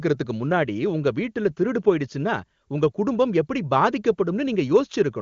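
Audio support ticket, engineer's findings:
Nothing to flag on this one: the speech comes through the AMR wideband (HD Voice) link at 23.85 kbit/s with coding damage faint at most, so no fault found.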